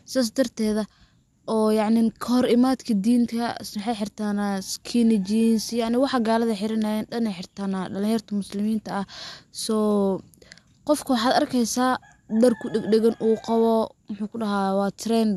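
A recording of speech with no technical faults to point to. Nothing in it needs a time or a cause.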